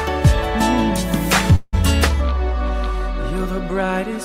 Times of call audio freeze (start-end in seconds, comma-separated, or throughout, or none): 1.55-1.75